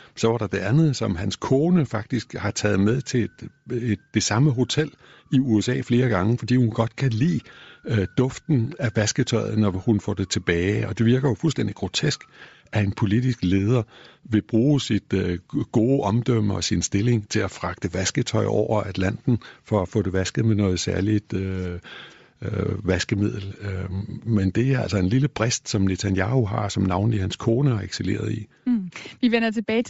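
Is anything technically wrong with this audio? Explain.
Yes. Throughout the speech there is plainly audible codec damage, likely from Bluetooth LC3 compression at about 32 kbps with 7.5 ms frames. It fills much of the upper spectrum with noise, so the sound is breathy and grainy. A spectrogram shows a speckled, smeared top band.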